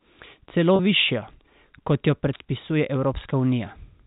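Packet loss with pitch repetition at 0.76 to 0.79 s and 3.24 s, just after "kot jo predpisuje": the receiver bridges the missing 30 ms and 10 ms by repeating the last pitch period, so the speech briefly holds with a buzzy, sustained quality. The longer gap points to about three lost packets and the shorter to one. The G.711 A-law telephone band is audible throughout as a cap near 4 kHz.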